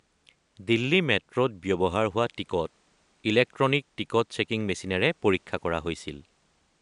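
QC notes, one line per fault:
No faults heard anywhere in this speech clip.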